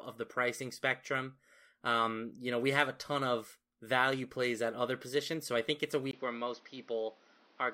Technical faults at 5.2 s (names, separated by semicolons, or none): none